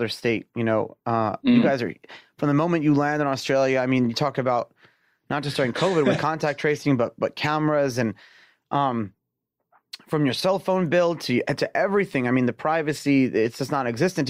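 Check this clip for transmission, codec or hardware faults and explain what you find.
I found no faults in this clip, so there is nothing to explain.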